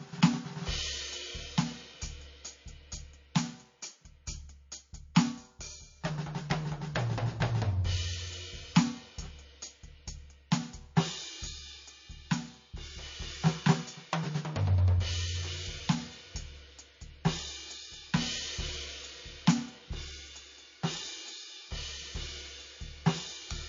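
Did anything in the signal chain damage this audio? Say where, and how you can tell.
Yes, codec stage: throughout, nothing sits above 7.2 kHz, far lower than a high-bitrate MP3 keeps, likely low-bitrate audio saved at a high bitrate.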